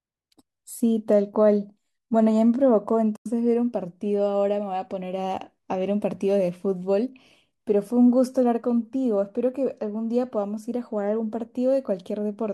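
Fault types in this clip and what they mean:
AAC frame loss with muting: a run of AAC frames was lost and the decoder zeroed their spectrum. From 3.16 to 3.26 s the speech fades out and back into a soft-edged hole about 100 ms long, fitting several short frames of likely AAC-ELD.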